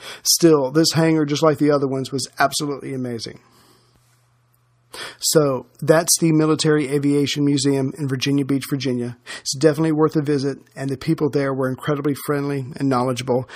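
Nothing here trips any alarms: no dropouts, clicks, glitches or other technical faults turn up anywhere in the recording.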